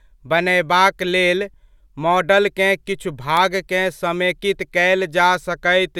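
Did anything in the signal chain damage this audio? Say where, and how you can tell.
Yes. At 3.37 s a single sharp snap sits on top of the speech. It is a brief transient of a few milliseconds that peaks at roughly -10 dBFS. This is an electrical switching spike, and it was likely picked up in the analogue wiring. A nearby switch, motor or static discharge would have arced, and the cabling would have coupled that burst of energy straight into the signal before conversion.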